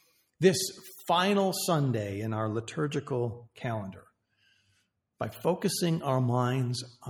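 Sound cut by the noise suppressor occurs twice: from 0.0 to 0.35 s, with the level dipping by up to about 15 dB over roughly a third of a second, and again from 3.95 to 4.89 s, where the drop reaches about 19 dB across around 0.7 s of affected audio. In both stretches the suppressor mistook wanted sound for background noise and turned it down, so the audio sinks below its surroundings before recovering.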